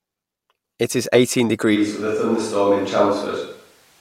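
At 1.77 s, right after "is eighteen", the speech abruptly turns roomy and hollow, loses low end, drops by about 5 dB and sits over background noise around 35 dB below it, lasting to the end. This is likely a switch to a distant microphone after the close one dropped out. On a waveform the envelope steps down and smears with reverberant tails. A spectrogram shows thinner bass and a raised noise floor filling the gaps.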